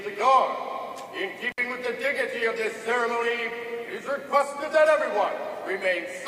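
The audio has an intermittent contact fault from 1.49 to 1.59 s: a loose cable or plug opens for about 58 ms, dropping the sound between crackles.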